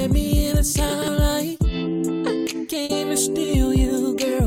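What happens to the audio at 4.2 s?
Nothing goes wrong at 4.2 s; the audio runs through that moment intact, with no dropout, click or distortion.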